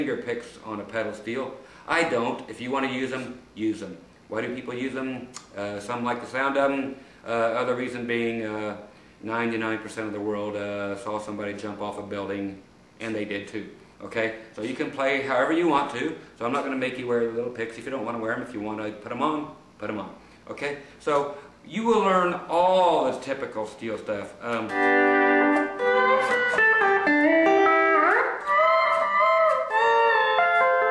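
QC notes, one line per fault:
No faults found in this clip.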